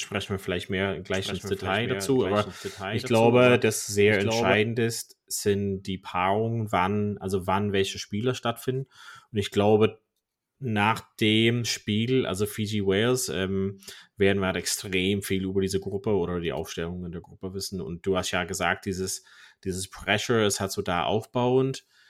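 From 1.14 s to 4.54 s, after "wir vielleicht mehr" and up to "ist sind die", the speech has a doubled audio track. A second full-band copy runs about a second behind the original and roughly 5 dB quieter. It carries no decay or room colour, so it is no echo. It starts and stops abruptly. The likely cause is the same signal captured again by a slower path, or an edit holding two copies out of step.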